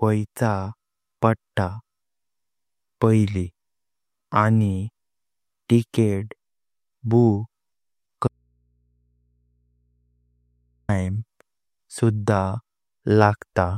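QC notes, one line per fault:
8.28–10.89 s, audio dropout to a faint residue: the speech cuts off abruptly mid-flow and for about 2.6 s nothing remains but a low mains hum sitting roughly 45 dB below the normal level, then the speech snaps back just as suddenly, with no fade at either edge. This is likely a loss of the source feeding a path that stayed live, so the open input picked up hum while the wanted signal was absent.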